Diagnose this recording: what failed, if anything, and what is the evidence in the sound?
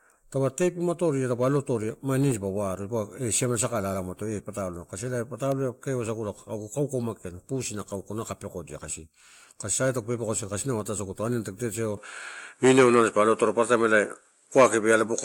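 At 11.97 s, right after "ataisaguto aniani tagu totereo", the speech abruptly loses everything above 11.4 kHz and stays that way to the end, with a level step of around 5 dB and a new, faint noise floor well below the signal. There is no gap at the change. This is likely an input switched to a poorer device at the driver stage. A codec bandwidth drop would narrow the band without shifting level and background noise together.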